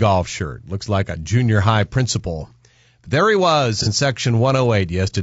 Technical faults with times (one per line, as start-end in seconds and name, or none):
0.00-5.22 low-delay AAC compression
3.83-3.88 AAC frame loss with concealment